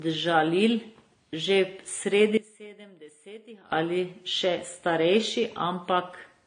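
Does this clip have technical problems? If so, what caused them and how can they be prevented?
Yes. Transcoding between lossy codecs runs through the whole speech clip: nothing survives above 9.7 kHz, and the smeared, swirly artefacts of a low-rate encoder sit under a second codec's own coloration. The sound points to a low-bitrate AAC-LC encode, around 32 kbit/s, that was likely re-encoded to WMA at a higher rate. The second pass cannot restore the lost band and spends its bits reproducing the first codec's damage. To prevent it, encode once from the original source and avoid converting one lossy file into another.

One channel inverted affects the section from 2.37 to 3.72 s, just before "ali še starejši". In the mono sum the speech drops by about 22 dB and leaves only a faint residue. This happens because one channel's polarity is likely reversed for that stretch, so the centred content common to both channels cancels. 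To prevent it, check polarity and mono compatibility on every edit or routing change that touches that section.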